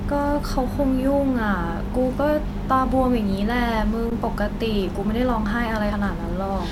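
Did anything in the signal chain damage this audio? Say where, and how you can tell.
Yes. At the driver or buffer stage, the output buffer underran at 4.1 s, an underrun with held sample. The converter froze on its last value for 15 ms, so the speech flattens into a brief stall, then resumes from the same point with only a soft edge.

At the codec stage, a few compressed frames were skipped at 5.91 s, dropped as missing or damaged. The speech jumps forward by roughly a tenth of a second.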